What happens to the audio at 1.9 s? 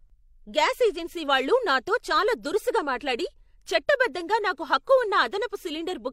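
Nothing goes wrong at 1.9 s: the speech carries on intact through that moment, with no dropout, click or distortion.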